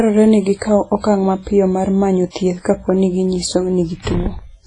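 Throughout the speech, the sound carries heavy artefacts of what is likely WMA compression. Nothing survives above 10.3 kHz. Long transform blocks smear quantisation noise around each syllable, giving a ringing, washy texture and a hiss that breathes with the level, consistent with roughly 24 kbps.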